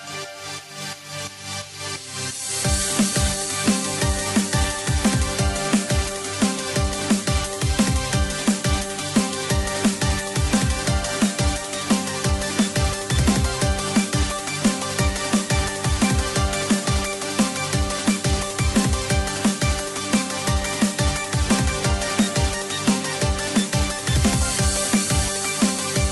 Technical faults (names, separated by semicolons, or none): none